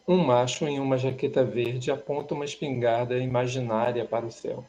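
Nothing in this bit of speech stands out as a technical fault; it just runs along without any glitch worth flagging.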